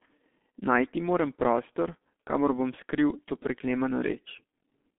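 From start to finish the speech carries G.723.1 codec damage, heavy here: the sound is muffled, with no content above about 3.7 kHz, and hoarse, with smeared consonants. This fits a 6.3 kbit/s voice coder whose slowly updated speech model blurs fast transitions.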